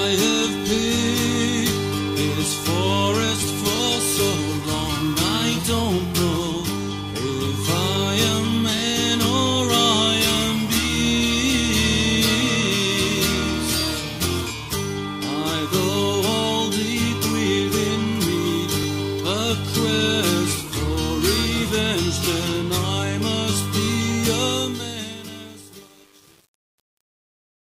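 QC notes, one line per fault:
3.76–3.78, 8.78–8.81, 13.81–13.83, 18.83–18.85 and 23.85–23.88 s: overlapping chunks. At each join a slice of about 23 ms plays twice, because every new 5.0 s chunk begins slightly before the previous one ended. The result is a brief stutter or click. What separates this from random dropouts or packet loss is the strict spacing: the joins arrive every 5 s, and nothing goes missing. Material is repeated rather than lost.
24.29–27.60 s: truncation distortion on a fade. The fade-out starts around 24.3 s. As the level drops, the gain stage keeps too few bits and adds no dither, which fits an 8-bit stage. From about 24.52 s the tail turns gritty as the waveform collapses into a few coarse steps. This sets it apart from plain hiss or a clipped fade: the roughness grows as the level falls rather than as it rises.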